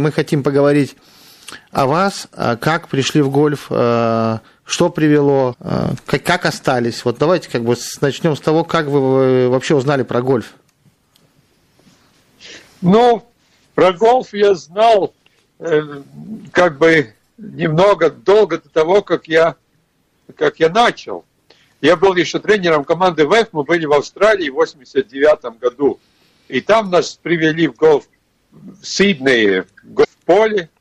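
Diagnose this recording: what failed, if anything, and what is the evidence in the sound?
The codec stage is the weak link. The whole clip has a watery, swirly texture, dulled treble and smeared attacks, plainly audible throughout. That's the signature of MP3 compression, likely at a low bitrate around 64 kbps: the encoder runs short of bits, cuts the top end and lets weak frequency lines flicker on and off between frames.

There's also damaged data in the compressed stream, heard as short blips at 5.50 to 5.55 s and again at 30.00 to 30.05 s. At each spot the decoder hits bad bytes, loses frame sync and skips ahead to the next header. That's why each one comes out as a brief blip in the sound.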